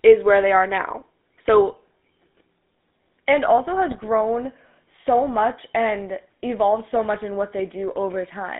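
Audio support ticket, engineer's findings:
GSM full-rate codec, whole clip. Buzzy, gravelly roughness on the speech, plainly audible, with a band of roughly 200 Hz to 3.6 kHz. Sounds like a 13 kbps full-rate GSM leg: the vocal tract is modelled and driven by evenly spaced pulses with only every third excitation sample kept. That thinned-out excitation is where the grit comes from, and nothing above 4 kHz makes it through.

GSM bit errors, 3.88 to 4.07 s. Short garbled burst, about 0.19 s, with the speech breaking up into squawking, popping or gargling. Probably corrupted bits hitting the GSM decoder on a weak radio link, at a rate that points to something like 1.6%. Bad filter, pitch or gain values bend the spectrum or spike the level, frame after frame. The span fits about nine 20 ms frames.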